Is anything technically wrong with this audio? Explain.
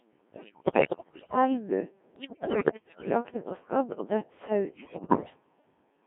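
Yes. The whole clip has gone through the Codec 2 vocoder, and it also has three bursts of bit errors on digital voice radio.

Codec 2 vocoder: This runs throughout. The speech is robotic and buzzy. The damage is heavy. Codec 2 does not keep the waveform. It sends only pitch, voicing, energy and a spectral envelope. The decoder then rebuilds the voice from sine waves. The heavy damage fits a very low mode, around 1.3 kbit/s. The band is narrow, about 200 Hz to 3.5 kHz, like a radio link.

Bit errors on digital voice radio: These come at 0.33 to 1.36 s, 2.16 to 3.09 s, and 4.76 to 5.30 s. The second burst ends just before "jakte på skadd og". Flipped bits corrupt whole vocoder frames. Each bit steers the pitch, level, voicing or spectrum of a frame. So the synthetic voice jumps in pitch and loudness. Its tone colour lurches. It breaks into bleeps, warbles and robotic gibberish. The middle burst has the highest error rate, about 20%.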